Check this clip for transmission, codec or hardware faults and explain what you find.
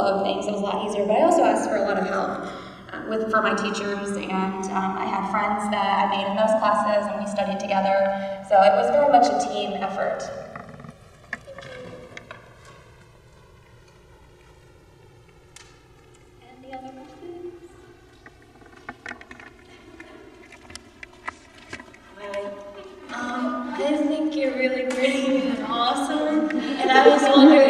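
One fault runs through the whole clip: the channels drift apart. The left and right signals seem to come from devices on separate clocks, off from each other by about 150 ppm, so the delay between them grows steadily to about 4 ms by the end. Summed to mono, the comb-filter notches glide slowly across the spectrum, heard as a slow flanging sweep. On a spectrogram this appears as evenly spaced dark notch lines that drift over time.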